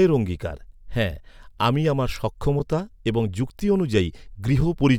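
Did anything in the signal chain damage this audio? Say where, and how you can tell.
Yes: a gap between chunks at 1.59 s, just after "অঙ্গীকারঃ হ্যাঁ" and before "আমি আমার", and again at 2.60 s, after "অঙ্গীকারঃ হ্যাঁ আমি আমার". Each is a hard-edged hole of about 6.5 ms, one second apart. This points to the playback or storage stage that joins 1-second chunks: silence is inserted at each boundary rather than the chunks butting together. No speech is lost, but the flow breaks at each join.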